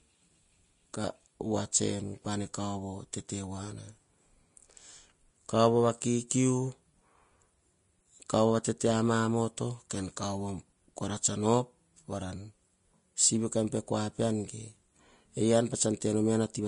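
Vorbis compression runs through the whole speech clip. Nothing reaches above 10.6 kHz, and the remaining treble is quantised so coarsely that fine detail turns to hiss and grain, with roughened tones and softened consonants. The damage is plainly audible and fits a low bitrate of around 33 kbps, most likely from Vorbis encoding.

Pre-echo at 9.90 s. A sharp attack landed late in a transform block, so quantisation noise sized for the loud onset spread backwards into the quiet moment before it. A brief hiss of about 11 ms precedes the attack, which sounds smeared rather than crisp.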